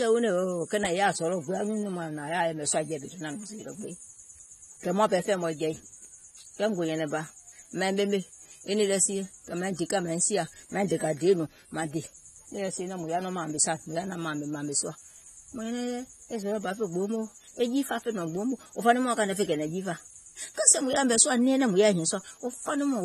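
From start to finish the speech is band-limited, with nothing above 13.1 kHz, and it carries plainly audible smearing and a fizzy, warbling edge on sibilants. This points to AAC compression, likely AAC-LC at around 32 kbps, where coarse quantisation and a lowered cut-off strip detail.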